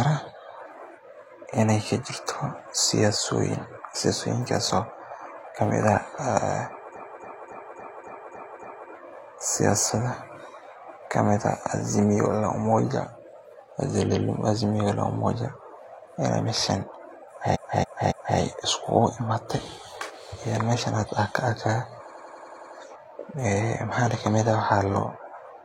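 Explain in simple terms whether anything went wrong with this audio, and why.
At 4.71 s the speech jumps ahead a few milliseconds, likely a dropped buffer (overrun) that got overwritten before being read.

The bigger problem is repeated frames, which make the speech stutter as chunks replay:
6.92–8.87 s: a 0.28 s chunk seven extra times.
14.07–14.21 s: a 0.14 s chunk once more.
17.51–18.34 s: a 0.28 s chunk three extra times.
22.06–22.71 s: a 0.09 s chunk seven extra times.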